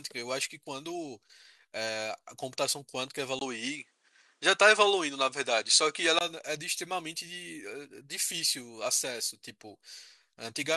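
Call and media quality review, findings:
Speech goes dull and band-limited 3.39 to 6.21 s, nothing above 10.5 kHz, about 5 dB level shift, new noise floor about 50 dB down, 20 ms gap at 3.39 s. Likely an input switched to a poorer device mid-call.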